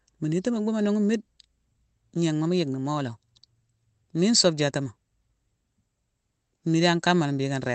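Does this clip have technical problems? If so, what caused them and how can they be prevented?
No, this speech clip has no technical problems to fix. It has passed through a call codec, and the top end stops at about 8 kHz, which fits Opus running at a modest bitrate of around 20 kbps.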